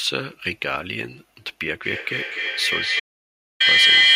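From 1.83 s to the end, the speech carries a feedback echo between two devices. Each phrase returns roughly every third of a second, thinner and ringing. The repeats build rather than fade, peaking about 10 dB above the speech. One device's output re-enters another's microphone.

From 3.00 s to 3.60 s there is an audio dropout to silence. For about 600 ms the sound stops completely, with no room tone. Anything said then is lost. The likely cause is a dropped input link while recording continued.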